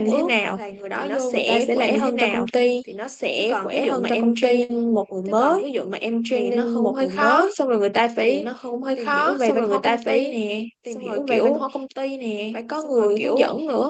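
A second copy of the whole signal, most likely captured again by a slower path or left in by an edit that holds two copies out of step, runs through the speech from start to finish. This doubled audio track trails the original by roughly two seconds at about the same loudness, so every phrase is heard twice, overlapping later material. The copy is full-band and dry, with no decay or room colour, so it sounds like a second identical track rather than an echo.

At 4.63 s a burst of packet loss interrupts the stream for about 60 ms, until 4.71 s. The receiver filled the gap by extending the last sound for about 57 ms and fading it down, giving a brief held buzz or fading hiss before the audio picks up again further on with that stretch missing. The call path's Opus coding noise and 8 kHz band limit, consistent with a 24 kbps setting, can be heard around it.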